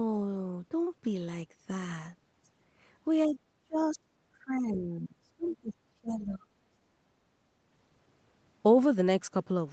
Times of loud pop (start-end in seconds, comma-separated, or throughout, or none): none